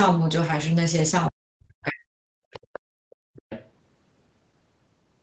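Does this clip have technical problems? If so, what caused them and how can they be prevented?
Yes. From 1.3 to 2.53 s the speech is suppressed in double talk. It drops by roughly 40 dB in places, for about a second in total. Both sides likely talked at once, and the echo canceller turned everything down. Headsets or full-duplex tuning of the canceller prevent this.

The other side's voice leaks through at 2.53 to 2.79 s, 3.10 to 3.16 s and 3.34 to 3.7 s. It sits well below the speech and is faintest at 3.10 s. This is likely loudspeaker echo that the canceller left behind. A headset or lower speaker volume prevents it.

The background is gated by the echo canceller from 2.81 to 3.34 s. The room sound falls by about 29 dB while the loudspeaker plays, then returns. Gentler suppression settings or a headset avoid this.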